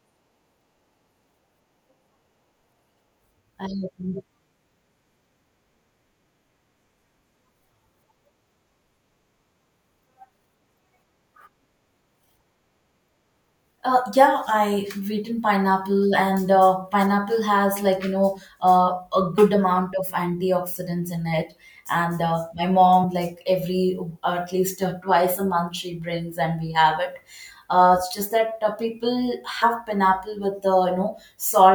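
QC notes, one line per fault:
19.37, 23.03 and 29.61 s, compressed frames skipped: brief smeared blips where the speech jumps ahead, before "amount of antioxidants in" and between "uh my" and "like every uh at". Whole frames went unplayed, roughly 30, 50 and 100 ms lost, multiples that fit a frame of about 26 ms. The overlapping neighbouring frames blur each join instead of clicking.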